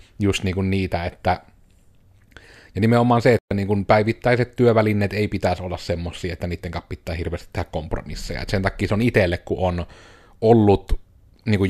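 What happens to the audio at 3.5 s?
Right there the speech hits a digital broadcast dropout, silent from 3.39 to 3.51 s. The receiver stopped getting good frames and muted, so after "ja nimenomaan se" there's a clean 120 ms hole, and the sound comes back at "niin kun päivittäiset työvälineet".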